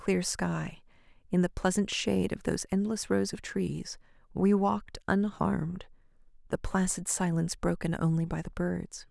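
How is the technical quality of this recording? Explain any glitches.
No glitches are audible anywhere in the recording; the technical quality holds steady throughout.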